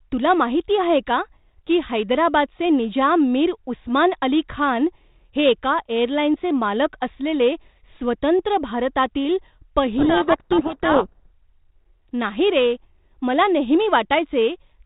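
From 9.98 to 11.27 s the speech gets buried in harsh, gritty distortion. That's a codec payload misread: the two ends disagree on the bit order of the G.726 code words, so the difference values decode wrong until they line up again.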